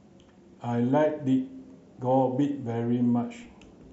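At 3.44 s, concealed Bluetooth headset packet loss: one lost packet of about 7.5 ms is patched with repeated recent waveform, leaving a barely noticeable blip.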